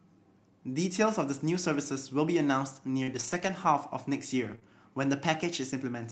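Speech heard through a call path that points to Opus coding, with content stopping near 8 kHz, carries scattered short gaps between 3.03 and 4.63 s. About three lost packets, the longest roughly 40 ms, were patched by extending the preceding sound. This leaves brief ticks and smears that appear on a spectrogram as thin, blurred vertical slices.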